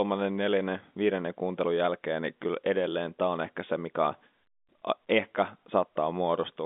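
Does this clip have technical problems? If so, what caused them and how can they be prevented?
No, no technical faults.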